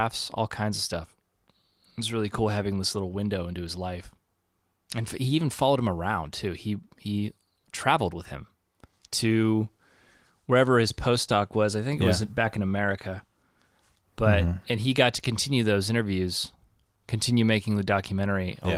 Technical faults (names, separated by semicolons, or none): none